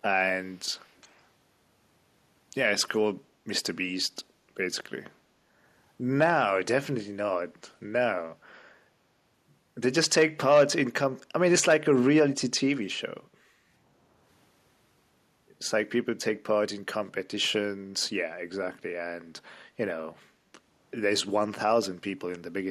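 At 0.51–0.59 s and 0.81–1.26 s, a faint, separate copy of the speech trails 417 ms behind. This is likely an echo leak, not room reverberation, which would blur rather than repeat.

At 4.24–4.5 s, 13.29–13.7 s and 20.32–20.5 s, the background dips by about 6 to 8 dB for a few tenths of a second. This is background gated by the echo canceller: the sound is turned down rather than cut out entirely, as a dropout would be.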